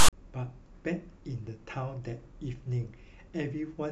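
File tags played as audio, from 0.0 to 0.13 s: a block of text tags followed by zero padding is read as if it were samples. The text bytes give a loud, one-sided rasp with hard edges, then the padding drops to silence before the speech begins.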